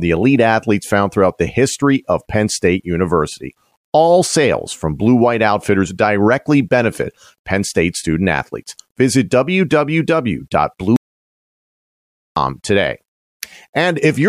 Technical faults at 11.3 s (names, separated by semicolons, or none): audio dropout to silence